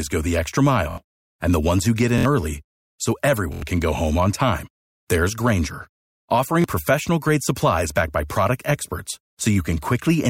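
Repeated buffer at 0.91–0.98 s after "go the extra", 2.18–2.25 s between "ones who get" and "early so", 3.53–3.62 s before "can go home on", and 6.62–6.64 s. Fresh audio arrived late, so the player looped its last block of about 23 ms, which fits a 1024-sample buffer. It repeats three, three, four and one extra times, producing a rapid buzzing stutter with hard joins that replaces roughly 70 ms, 70 ms, 100 ms and 20 ms of sound.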